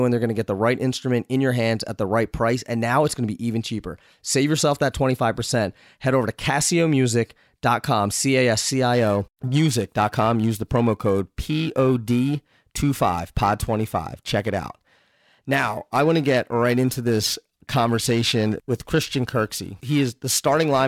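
Periodic clock jitter runs from 8.93 s to the end of the clip. The converter's sample clock is being shaken at around 1 kHz, so every component of the speech gains sidebands about 1 kHz above and below it. This gives a rough, metallic edge, strongest on high frequencies, that disappears in pauses.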